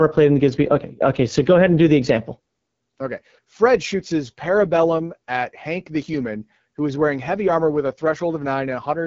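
AMR wideband (HD Voice) codec damage runs through the whole speech clip. The coder models the voice up to 6.4 kHz and fills the band above with shaped noise. The plainly rough, raspy texture fits 8.85 kbit/s, one of its lowest rates, and nothing sounds above 7.5 kHz.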